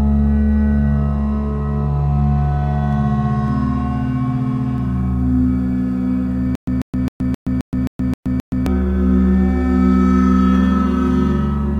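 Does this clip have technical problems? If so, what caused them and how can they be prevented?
Yes. From 6.55 to 8.66 s there is a stutter with silent gaps. A 142 ms burst repeats eight times, each followed by 122 ms of digital silence, every 264 ms. The audio meant for that stretch is lost. The likely cause is a stalled stream replaying its last fragment. Larger buffering prevents it.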